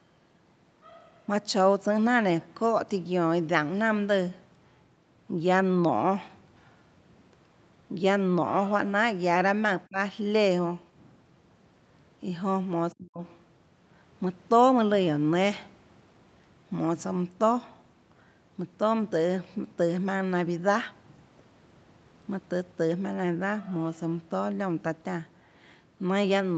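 When both ends likely talked at once, the echo canceller mistook the speech for loudspeaker echo and pushed it down: speech suppressed in double talk. It sinks by roughly 25 dB from 9.89 to 9.97 s, then nearly vanishes, about 40 dB down, from 12.93 to 13.21 s.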